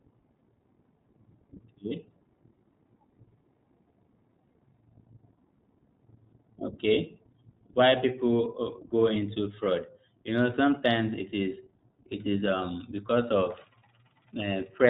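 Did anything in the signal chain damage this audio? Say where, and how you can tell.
Yes: iLBC codec encoding throughout caps the band at 4 kHz, leaving the speech muffled with a plainly rough, synthetic edge that fits 20 ms frames at about 15 kbps.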